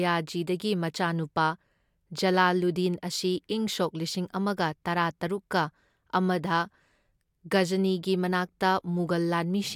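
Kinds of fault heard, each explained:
No kinds of fault are heard in this clip.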